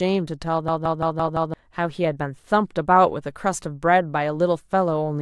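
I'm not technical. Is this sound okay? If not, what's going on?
No. System hang loop, 0.68 to 1.54 s: the computer briefly froze, replaying one 0.17-second piece of speech five times as a rapid stutter, losing about a second.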